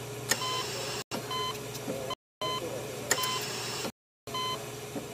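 Blocks of digital silence occur at 1.02–1.12 s (93 ms), 2.14–2.42 s (279 ms) and 3.90–4.27 s (372 ms). The output buffer likely went unfilled, consistent with 4096- and 16384-sample buffers, so the sound drops to silence abruptly. They appear as flat waveform lines and black spectrogram gaps bordered by vertical streaks.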